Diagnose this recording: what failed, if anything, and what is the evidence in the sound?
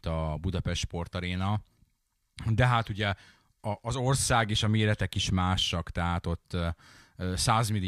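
Nothing in the recording points to a failure at any stage of the chain. The speech shows no audible trace of a wiring, converter, buffer, processing, network or playback problem.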